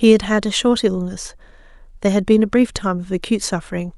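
No technical faults can be heard anywhere in this recording.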